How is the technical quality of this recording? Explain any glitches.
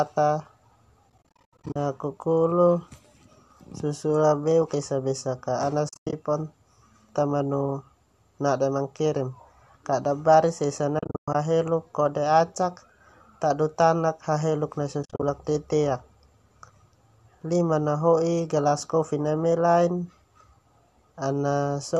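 The recording has four stretches of AAC frame loss with muting. A faint graininess also runs through it, which points to light low-delay AAC compression, likely AAC-ELD at a fairly generous bitrate.

AAC frame loss with muting occurs at 1.10–1.76 s, 5.89–6.13 s (after "esa besak ka ana"), 10.99–11.35 s (between "mankirim kada baris esa" and "haheluk kode acak") and 15.03–15.23 s (after "haheluk nai"). Each stretch holds scattered dropouts, the longest around a tenth of a second. The decoder zeroes each lost frame's spectrum, and the overlapping windows fade the sound out and back in, leaving soft-edged holes. On a spectrogram these show as blank vertical gaps, and on a waveform as tapered gaps in the envelope.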